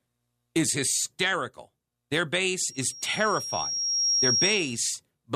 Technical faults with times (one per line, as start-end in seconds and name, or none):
2.67-4.90 loudspeaker feedback squeal